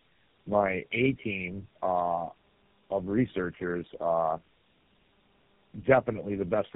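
From start to finish the speech shows tandem speech coding. The call seems to have passed through three speech codecs in a row, each decoding and re-encoding what the last one had already damaged. The losses stack. The voice sounds rough and muffled, with a warbly, watery edge. Nothing is heard above about 3.7 kHz. The character of the sound fits a chain that ends in a GSM full-rate coder.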